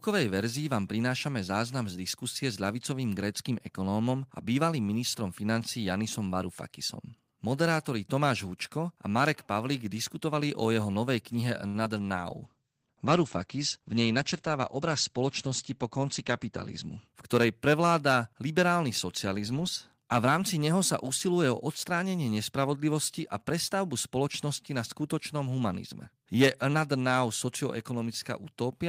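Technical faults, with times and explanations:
11.67–11.76 s, short stall from a late packet: right after "o jeho novej knihe" the sound hangs for about 70 ms, the last syllable drawn out with a faint buzzy edge, then speech resumes exactly where it stopped. The jitter buffer ran dry waiting for a late packet, so the receiver stretched what it had. Nothing is lost here, and the added wait raises the delay by about 70 ms. That sets it apart from a loss, which drops audio.
11.84–11.87 s, short concealed packet loss: a moment later, still just after "o jeho novej knihe", there is a tiny smear. About 20 ms of audio never arrived, and the decoder bridged the gap by extending the preceding sound for roughly 10 ms before blending back into real audio. Unlike the stall just before it, speech does not pick up where it left off. A sliver is actually gone.
12.31–17.14 s, call bitrate drop: for almost five seconds, leading up to "ktorej prevláda liberálny socializmus", the speech turns dull and watery. 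The treble above 8 kHz vanishes, where it had reached up to 20 kHz. This fits the encoder being pushed from about 32 kbps down to about 12 kbps after the bandwidth estimate fell. It is a sustained change in tone that later lifts, not a momentary glitch, which separates it from the brief concealment events.
14.63–15.85 s, jitter buffer speed-up: inside the muffled stretch, speech briefly runs about 6% fast while the pitch stays unchanged, sounding a little hurried. The receiver was holding more audio than it needed, so it trimmed many tiny pitch-period slices, around 70 ms in total, to shrink the delay. A bitrate change alters timbre and leaves timing alone. This fault does the reverse, changing pace while leaving tone and pitch intact.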